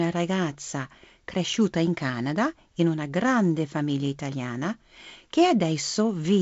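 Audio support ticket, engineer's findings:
Speech path through G.722 wideband coding at 48 kbit/s, with nothing above 7.7 kHz and the light upper-band hiss and slightly noisier lower band expected at that rate; no faults found.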